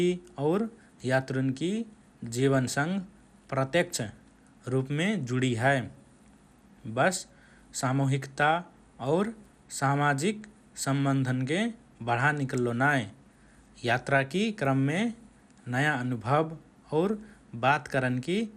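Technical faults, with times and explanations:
Throughout, MP2 compression: the speech sounds dull and carries a gurgling, granular roughness. Nothing is present above about 15.1 kHz, and upper sub-bands drop in and out while the remaining bands are coarsely quantised, likely from MPEG Layer II encoding at a low bitrate such as 80 kbps.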